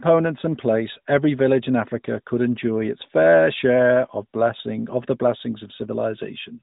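Nothing here is technically wrong: it's a speech clip that comes over an AMR narrowband mobile codec link, and there's no fault to point to anywhere in it.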